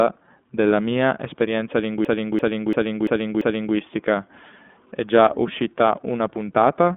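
Speech clip carried through the iLBC codec for its whole length. The audio is confined to a telephone-style band of roughly 200 Hz to 3.5 kHz with nothing above 3.7 kHz, and the voice has a plainly rough, synthetic edge from excitation coded independently in 30 ms frames, which fits the 13.33 kbps mode. From 2.05 s to 3.76 s a system hang loop takes over: a single 341 ms piece of audio repeats exactly five times, giving a stutter at about 2.9 Hz. This is the sound hardware cycling one ring buffer while the computer or driver was frozen, which fits a 16384-sample buffer.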